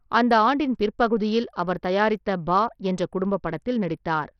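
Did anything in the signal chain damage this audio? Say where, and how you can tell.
Yes, at the codec stage, throughout the speech: the treble flickers in and out with a gritty, aliased noise riding on it, most likely Bluetooth SBC compression at a low bitrate near 64 kbps. Starved upper sub-bands drop bits. A spectrogram shows blocky, intermittent high bands.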